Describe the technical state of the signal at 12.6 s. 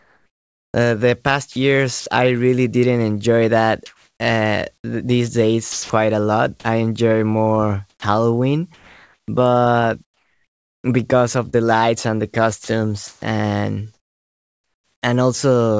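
At 12.64 s the signal has two overlapping faults. The first is sound dropped by the voice detector, from 12.64 to 12.68 s: 40 ms of speech vanishes and is replaced by a flat, steady noise. The likely cause is the sender's voice detector judging the sound to be background and halting transmission, which leaves the receiver to fill the hole with generated noise instead of the real audio.

From 12.64 s to 15.02 s there is comfort noise in place of the background. Over about 1.3 s of that stretch, the natural room sound gives way to a uniform, textureless hiss. This is likely discontinuous transmission: with no speech detected, the sender stops sending audio, and the receiver synthesises noise roughly matched to the earlier background. The G.722 call path, with nothing above 8 kHz, bandlimits that noise as well.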